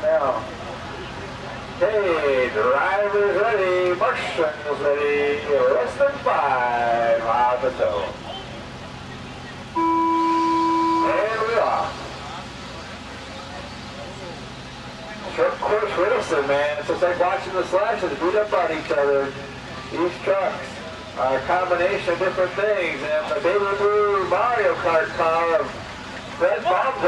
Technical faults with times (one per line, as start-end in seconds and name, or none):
none